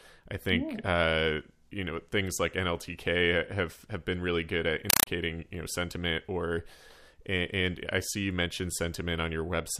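A compressed stream played as audio hits at 4.90 to 5.07 s: an undecoded Dolby Digital bitstream replaces the speech, heard as loud chattering static, 4 ms bursts repeating at 31.25 Hz.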